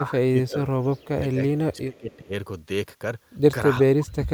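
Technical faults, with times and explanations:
0.0–1.4 s, 1.58–2.33 s, 3.8–4.34 s: speech suppressed in double talk. The level dips by about 20 dB in the first two spans and about 35 dB in the last, likely because the echo canceller ducks the near talker while the far side speaks.
0.5 s: echo leak. A faint delayed copy of the voice, about 25 dB below the speech and lagging by 362 ms, slips through, likely from loudspeaker pickup the canceller missed.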